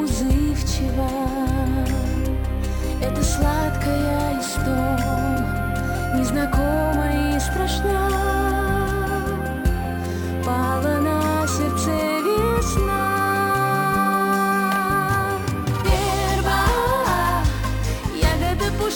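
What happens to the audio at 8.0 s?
At 8.0 s the audio carries imaging from sample-and-hold upsampling, present across the whole clip. Raising the rate from 24 kHz to 48 kHz by repeating samples without smoothing mirrors the spectrum into 12–24 kHz, about 23 dB down, heard as metallic fizz tracking the sound.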